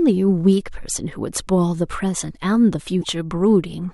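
At 2.99 s a brief glitch cuts into the speech, lasting until 3.05 s. This is damaged data in a compressed stream. Corrupted bytes made the decoder misread its frames and lose sync. It then hunted for the next valid frame header.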